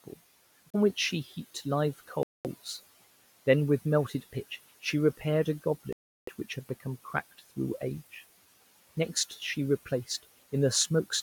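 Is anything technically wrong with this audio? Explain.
Yes. The speech breaks off three times in what sounds like a Bluetooth stall: at 0.70 to 0.75 s (about 34 ms of silence), 2.23 to 2.46 s (about 218 ms), and 5.93 to 6.29 s (about 348 ms). The likely cause is radio interference delaying packets to the headphones, so their buffer empties and playback halts until resent data arrives. Each gap drops abruptly to silence and then resumes.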